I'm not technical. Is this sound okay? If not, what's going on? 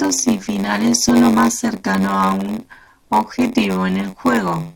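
No. Two things are wrong.

The first is a block size mismatch (padded), and it runs through the whole clip. One part of the audio chain hands over smaller chunks of sound than the next part expects, which fits chunks of 512 samples. The gap left in each chunk is filled with silence. Those tiny silences repeat about 94 times a second, so a low buzz sits under the speech. They also stretch the speech, so it plays about 6% slower than normal while keeping roughly its normal pitch.

The second is an overlap between stream segments, heard at about 1.09 s, just after "y finales" and before "lo más cercano". The audio arrives in pieces about 4 seconds long, and two of these pieces were marked as overlapping in time. The player removed the supposed overlap, which cut out a sliver of sound that was not actually repeated. You hear this as a small click or skip at that point.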